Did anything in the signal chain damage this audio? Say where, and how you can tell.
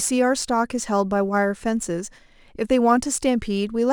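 Yes, at the converter: sample clock jitter, roughly 2 microseconds, throughout. Hiss rides on loud, bright speech, about 35 dB down, and vanishes in pauses.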